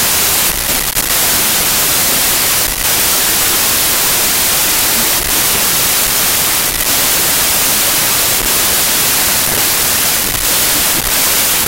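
A speech recording buried under loud, harsh noise from start to finish, with the voice dragging at half speed and an octave low. It's a wrong sample width fault: 32-bit integer data read as 16-bit split every sample in two, doubling the count and leaving the low halves as noise.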